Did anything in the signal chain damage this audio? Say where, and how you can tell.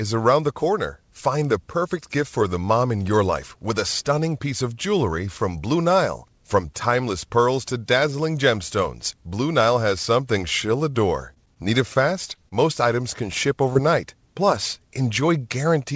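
Yes. The network stage dropped packets on this call, and the receiver's concealment left short concealed packet loss at 11.34 to 11.51 s, at 11.54 to 11.58 s just after "has something she'll adore", and at 13.73 to 13.77 s. Each hole is about 20 ms, which fits one lost 20 ms packet. The decoder extended the preceding sound to fill the gap and then blended back into the real signal, so each spot is heard as a brief smear or wobble.

Between 11.94 and 12.53 s, just before "items can", repeated packet loss from the network produced four separate holes. The longest is 25 ms, and about 13% of that stretch is concealed. Each patch repeats the last sound before the next gap arrives, so the passage comes out choppy, with small pieces missing. The G.722 path underneath, with nothing above 8 kHz, gives these artefacts a dull, band-limited colour.

The analogue wiring is at fault at 13.32 to 13.42 s, just after "items can", where there is loose connector crackle. 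A worn or dirty contact was making and breaking the circuit rapidly, chopping the signal on and off. It is heard as an irregular tenth-of-a-second burst of scratchy crackle, and its ragged texture sets it apart from the smoother smears of the network concealment.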